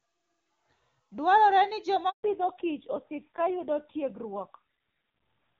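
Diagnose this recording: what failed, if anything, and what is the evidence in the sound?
A handover gap at the network stage: the call moved between networks and no speech frames arrived from 2.09 to 2.23 s. The speech dies away within a few tens of milliseconds, then leaves a 140 ms silence in which anything spoken is lost.

Fallback to narrowband at the codec stage: from 2.23 s to the end, the call drops from the clean HD Voice codec heard earlier to a narrowband one. Nothing above 4 kHz remains, so the speech turns duller and rougher, which fits low-rate AMR-NB near 5.9 kbit/s.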